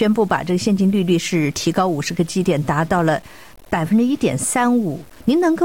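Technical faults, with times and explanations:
Throughout: low bit depth without dither. The sound was likely truncated to about 7 bits, so the rounding error tracks the signal and comes out as grainy, shifting distortion sitting roughly 30 dB down, rough on quiet passages, with the faintest bits sputtering between steps.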